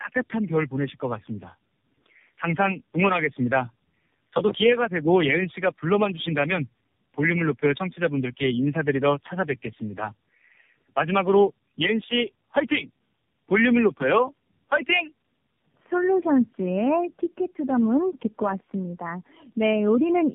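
Across the whole recording, the speech has passed through tandem speech coding. It was decoded and re-encoded at each link border, with three low-rate speech coders in a row, which fits a path of AMR-NB, G.711, G.729A, G.711 and back to AMR-NB. Each coder works on the errors left by the one before, so the speech sounds rough, muffled and warbly, and nothing is left above 3.7 kHz.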